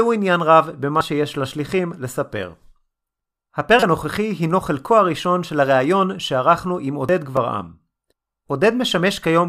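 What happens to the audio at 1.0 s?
Damaged data in a compressed stream corrupts the speech from 0.98 to 1.01 s. The decoder meets bytes it cannot read correctly, loses its place in the frame structure and searches for the next valid frame header, producing a brief chirp or squawk.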